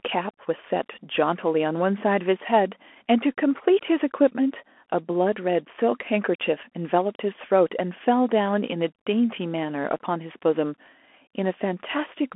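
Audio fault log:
Throughout, Bluetooth CVSD headset codec: the speech is squeezed into a narrow telephone band, roughly 250 Hz to 3.4 kHz, with nothing above about 3.8 kHz. CVSD codes each sample as a single up-or-down bit, 64 kbps here, with a step size that adapts to the signal. Fast, loud high-frequency movement outruns that step, so s sounds turn scratchy and distorted, and the coarse stepping leaves a granular hiss beneath the voice; the codec damage is plainly audible.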